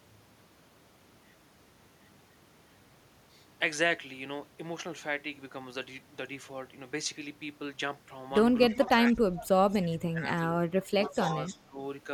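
It's a short speech clip, and the trouble sits in the last few seconds. From 8.68 to 9.5 s the voice sinks sharply, by something like 20 dB at its worst, for most of that stretch. Then from 10.13 to 11.79 it dips again, by roughly 15 dB, in pieces adding up to about half a second. That's speech suppressed in double talk, likely the echo canceller ducking this talker while the far side was speaking too. Overlapping those spots there's an echo leak: a faint copy of the voice trailing 271 ms behind, around 20 dB down, from 8.69 to 9.74 s and again from 10.83 to 11.58 s. The fixed delay suggests a loudspeaker on one end whose canceller likely didn't fully scrub its mic pickup before sending it back.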